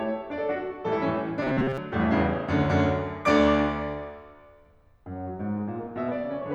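A music clip with robotic sound from repeated short buffers between 1.42 and 1.78 s: a rigid, metallic buzz at 133 Hz, likely from a segment of about 7.5 ms being looped over most of the audio. Unlike flanging, this buzz holds one fixed pitch and does not sweep.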